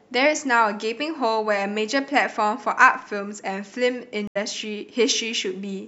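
At about 4.27 s the speech drops out for roughly 80 ms, and by 4.37 s it's back, but it has skipped ahead. That's a stream reconnect: the connection broke, the player went quiet, then reconnected and spun up a fresh decoder mid-stream. Since it picks up from wherever the live feed had reached, it lands somewhere around 70 ms past where it cut off, so you hear a short gap followed by a small jump in the speech.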